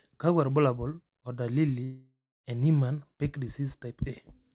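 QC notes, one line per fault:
1.84–2.46 s, long network dropout: after "kakwa irbulabol o dalili" the sound stretches into a fading buzz, then about 0.27 s of silence, resuming with 0.6 s lost, likely from dropped packets. Spectrogram shows a smeared decay into a blank gap, all below 4 kHz; the waveform tapers to a flat line.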